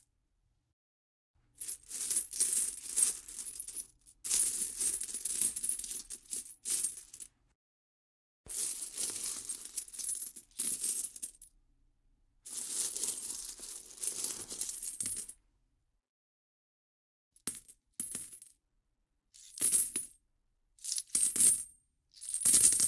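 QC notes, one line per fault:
Nothing stood out on listening to this recording of sounds.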